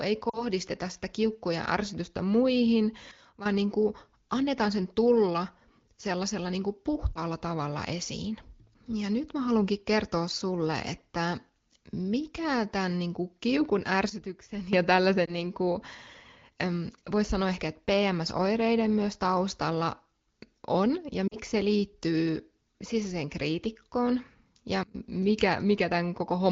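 At 0.29 to 0.43 s, radio errors corrupt AMR speech frames, a gap of about 40 ms, consistent with two frames. The decoder repeats its last good pitch and vocal tract settings at falling gain, so the sound briefly smears and dips before recovering, slightly rough, through an otherwise clear wideband AMR-WB path.

At 3.11 to 3.46 s, a sudden gain jump drops the level by about 12 dB. This is likely a digital gain change applied without a ramp, so the sound and the background noise fall together at once.

At 7.14 to 7.18 s, a lost AMR speech frame, about 20 ms, causes a short warble.

At 14.10 to 14.73 s, the same abrupt drop of about 12 dB recurs.

At 15.25 to 15.35 s, another single-frame loss of about 20 ms produces a brief warble.

At 21.28 to 21.37 s, a two-frame loss of about 40 ms brings another quick dip toward near silence.

At 24.83 to 24.95 s, the deepest gain jump cuts sound and noise together by about 24 dB.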